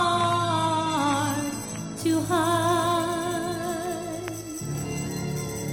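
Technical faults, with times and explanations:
0.0 to 2.0 s, adaptive stream starting at a low bitrate: the opening two seconds sound dull and a bit smeared, with nothing above about 14.1 kHz and the codec artefacts more obvious. That points to the player grabbing a cheap version of the stream, something like 32 kbit/s AAC, to get going fast, then jumping to a richer one, around 96 kbit/s, once it had sized up the connection. That's why the quality lifts abruptly at 2.0 s with no gap.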